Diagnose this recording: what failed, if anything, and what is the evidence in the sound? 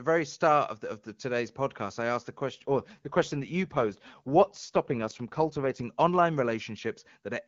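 What failed is an AMR rate drop, a network-driven codec change. Right after "podcast I asked the", from about 2.51 s to 5.83 s, the speech turns rougher and more synthetic. The band doesn't narrow and nothing drops out. The link evidently got weak, so the network pushed the AMR-WB encoder down, which fits a step from 23.85 to about 8.85 kbit/s, spending bits on error protection. Around that stretch the HD Voice coding sounds clean.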